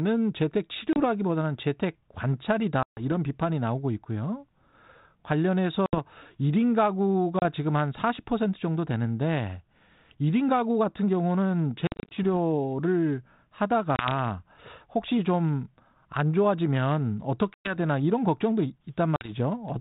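Packet loss on an ADPCM call hits at 0.93, 2.83, 5.86, 7.39, 11.87, 13.96, 17.54 and 19.16 s. Each hole is silent and hard-edged, lasting 30 to 140 ms. The 11.87 s one loses 170 ms scattered over about a quarter second. Afterwards the speech comes back slightly distorted, because the decoder's predictor has lost track of the sender, and it settles within tens of milliseconds.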